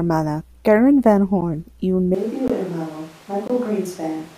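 Speech with three blocks of digital silence, abrupt dropouts: 1.41 s, just before "y un", fitting a 512-sample buffer; 2.48 s (19 ms); and 3.48–3.50 s, fitting a 1024-sample buffer. From 2.15 s, after "y un", to the end, the sound turns roomy, thin, about 10 dB quieter and noisier, likely a switch to a distant microphone.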